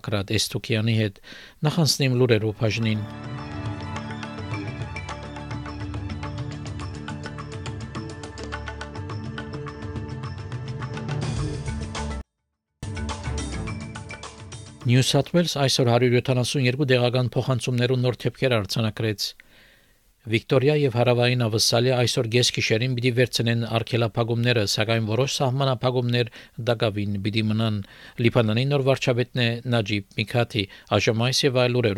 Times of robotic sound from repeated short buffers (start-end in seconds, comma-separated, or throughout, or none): none